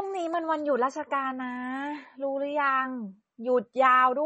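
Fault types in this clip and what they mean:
MP3 compression: The speech has nothing above 8.3 kHz, so the top end is cut off cleanly, and the damage is plainly audible as a watery, swirly texture where weak frequency lines flicker on and off from frame to frame. That's likely an MP3 encoder starved of bits, throwing away whatever its hearing model rated least important, and the result fits a very low rate around 32 kbps.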